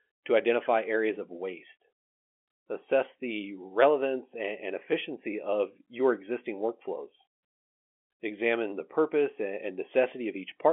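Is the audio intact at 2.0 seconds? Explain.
Yes, the audio is intact at 2.0 seconds, with nothing there beyond the narrow telephone band of the G.711 line it travels over.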